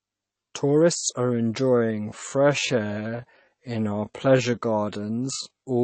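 From the start, the speech sounds dull and watery. The treble stops at a fixed frequency as if cut with a knife. S sounds turn swirly and metallic, and consonant onsets smear. This is likely MP3 compression at a low bitrate, which fits something near 32 kbps. With so few bits, the encoder drops the top band and zeroes weaker frequency lines, letting them flicker on and off between frames.

At 1.17 s the pace suddenly slows, and it stays slow to the end. Playback runs at about 0.66 times normal speed, yet the pitch does not drop. The result is drawn out and dragging. This points to a time-stretched section. Software likely lengthened the audio while holding the pitch, by repeating short slices of the sound.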